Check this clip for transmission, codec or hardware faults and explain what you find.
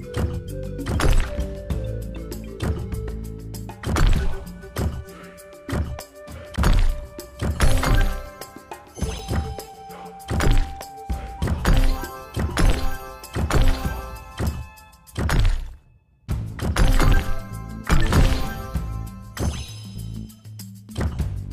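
Three brief codec faults, all damaged data in a compressed stream, at 6.55–6.59 s, 9.16–9.20 s and 12.68–12.72 s, each about 40 ms long. Corrupted bytes in the stream make the decoder misread or reject frames and resynchronise at a later header. Each event is a short disruption lasting a few tens of milliseconds, heard as a chirp, squawk, click or brief gap.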